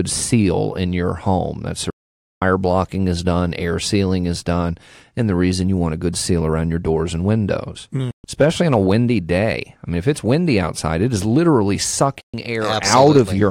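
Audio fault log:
1.90–2.42, 8.11–8.24 and 12.20–12.34 s: digital broadcast dropout. The speech cuts to silence through a 3 ms fade, then resumes later in the programme. The receiver lost frames and muted. The gaps are 512 ms and twice 128 ms, which fits whole 32 ms frames dropped.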